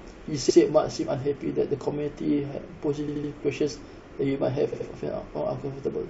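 A speech clip with repeated frames: a block of compressed audio about 78 ms long, consistent with three codec frames, was delivered again and replayed, at 3.07 to 3.31 s and 4.72 to 4.87 s. Each repeat produces a stutter and stretches the speech by 0.24 s and 0.16 s.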